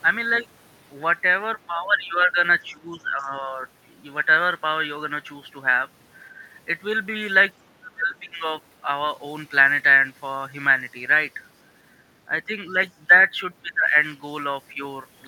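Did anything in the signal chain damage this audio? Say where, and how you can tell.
Yes. Speech dips at 2.72–3.58, 6.27–6.39, 7.62–8.46 (deepest), 13.62–13.96 and 14.73–14.79 s. This is likely speech suppressed in double talk by the call's echo canceller.

A faint second voice slips in at 3.19–3.28 s, far below the speech. This is likely the other side's voice leaking through past the echo canceller.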